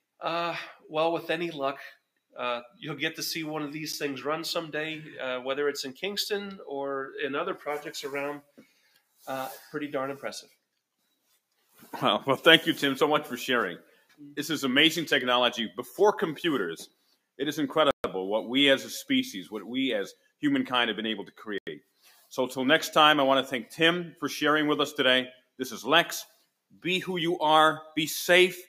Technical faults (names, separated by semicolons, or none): noise suppressor applied to music or sounds; sound cut by the noise suppressor; Bluetooth stall